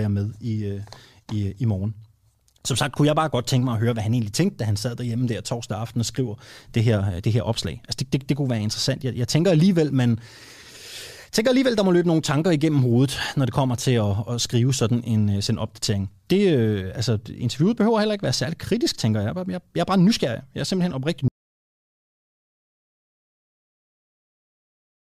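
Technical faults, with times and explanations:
21.28–25.04 s, audio dropout to silence: after "er simpelthen oprigtig" the speech cuts to silence, no room tone, until the end. Likely the input was lost while recording continued.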